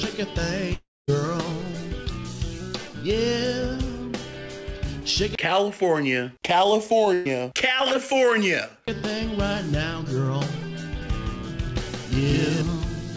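From 0.74 to 1.10 s there is a long network dropout, likely caused by the stream stalling so that no audio reached the receiver for about a third of a second. The receiver stretched the last sound into a fading buzz or hiss. After that fill decays, roughly 210 ms of near-silence remains. The audio then resumes further on, with about 340 ms of the original simply gone, so the sound jumps forward rather than continuing where it stopped.

At 7.14 to 7.32 s a burst of packet loss hits. A run of packets arrived too late or not at all, leaving about 120 ms missing. The receiver concealed it by holding and repeating the last sound for about 115 ms and turning it down as the gap went on, so it comes across as a brief held buzz or fading hiss. There is no true silence, and playback picks up past the lost portion with a slight timing shift of a few milliseconds.

From 11.02 to 12.62 s a doubled audio track appears. 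A second full-band copy of the same audio runs about 150 ms behind the first at roughly equal loudness. This is likely from the signal being captured twice, once through a slower path. The lagging copy has no reverb tail or room colour, so it sounds like a clean slapback rather than an echo. It cuts in and out abruptly at both ends.

Throughout, the call codec's band limit is audible, with nothing above 8 kHz.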